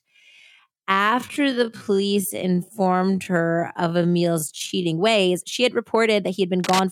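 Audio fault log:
0.00–4.84 s, time-stretched section: The speech drags, running at roughly 0.58 times its normal pace, then jumps abruptly back to normal speed at 4.84 s while the pitch stays the same across the change. This is likely the work of software that lengthened the passage to fill a set duration, holding the pitch steady by repeating short slices of the waveform rather than simply playing it back slower.
6.61–6.80 s, cable scratch noise: For about a fifth of a second, a burst of dense, uneven scratching sits over the speech, roughly 5 dB below the speech level. The likely cause is a worn cable, connector or control carrying a DC voltage being moved, so that its contact resistance fluctuates rapidly and injects irregular noise into the signal path, which the ear hears as a brief rustle.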